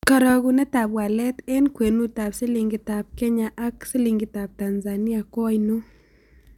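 No audible technical faults.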